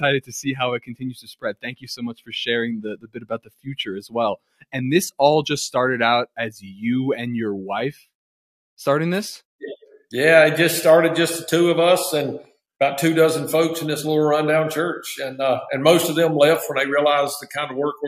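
All the way through, a noise suppressor applied to music or sounds keeps pumping the level up and down by around 10 dB, treating sustained material as noise. Sound gets cut by the noise suppressor at 0.8–1.95 s, 2.14–2.32 s, 2.97–3.67 s, 4.37–4.74 s, 6.27–6.65 s and 7.93–8.09 s, sinking by about 16 to 21 dB.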